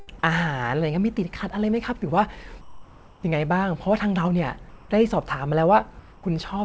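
Comfort noise in place of the background at 2.61 to 3.23 s, 4.69 to 4.89 s and 5.99 to 6.23 s: in these speech pauses the real background gives way to a steady, featureless hiss, about 3, 1 and 2 dB quieter, most likely because the sender's voice detector stopped transmission and the receiver synthesised filler noise. Throughout, nothing reaches above 8 kHz, which fits a G.722 call codec.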